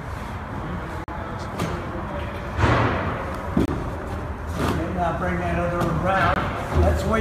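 Blocks of samples dropped to zero with no fade, leaving blocks of digital silence at 1.04–1.08 s, 3.65–3.68 s and 6.34–6.36 s, each a short hole.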